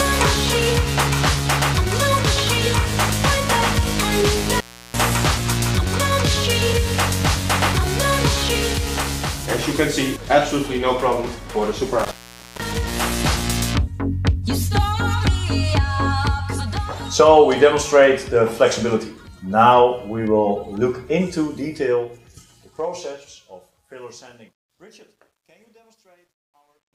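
At 4.56 s the sound drops out abruptly. This is an intermittent contact: a loose plug or cable briefly breaks the signal path. Crackle marks both edges, and the gap runs to 4.98 s, with the line open for about 340 ms. At 11.99 s the same fault returns. This time the line stays open for about 480 ms, until 12.72 s.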